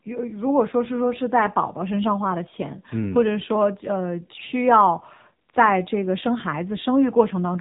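Throughout this speech clip, the signal has passed through the AMR narrowband mobile codec (AMR-NB), which samples at 8 kHz and rebuilds the voice from a vocal-tract model excited by a handful of pulses per 5 ms subframe. Nothing above 4 kHz survives, so the speech sounds muffled and phone-like. The plainly audible buzzy, synthetic coarseness fits a low operating rate of about 7.4 kbps.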